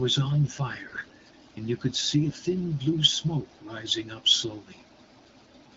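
Speech coded with AMR-WB (HD Voice) at a rate that fits 12.65 kbit/s has AMR bit errors from 0.87 to 1.12 s, where roughly 15 percent of the weakly protected frame bits arrive corrupted across what sounds like about a dozen frames. Misplaced excitation pulses and wrong gain and spectral values make the sound hoarse, scratchy and gargly while pitch and level hold.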